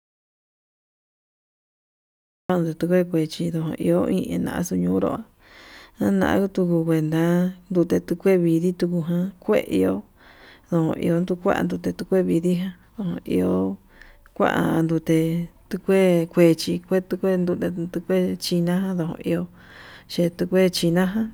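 The speech clip opens in dead silence, with no room tone at all, and the sound only comes in at about 2.50 s. It is an audio dropout to silence already under way when the recording begins, likely from a lost input or mute while silence kept being written.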